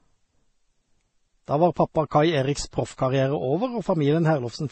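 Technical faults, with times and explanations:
Throughout, transcoding between lossy codecs: dull speech, nothing above 8.3 kHz, stacked smearing and swirl, likely low-rate MP3 re-encoded as Vorbis, each adding artefacts.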